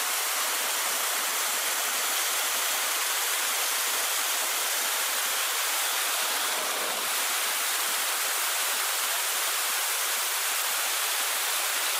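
From start to finish, the audio plays at double speed. This is the fault of audio read two samples at a time. The reader takes each pair of samples as one frame, as if the stream had two channels or samples twice as wide. So it gets through the sound twice as fast. Everything runs at 2x speed and sits 12 semitones higher, a full octave up.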